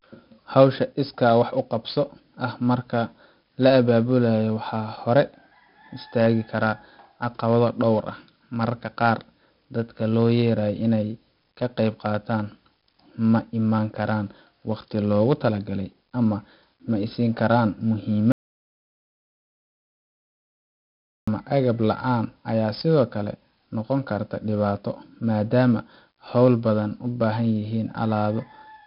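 From the start the speech has heavy 4-bit ADPCM compression: gritty hiss riding every loud syllable, smeared attacks, and nothing above 5.3 kHz, which fits a roughly 11 kHz, 44 kbps stream. At 18.32 s there's an audio dropout to silence, plain silence with no room tone until 21.28 s, so nearly 3 s of speech is gone, likely from a lost input.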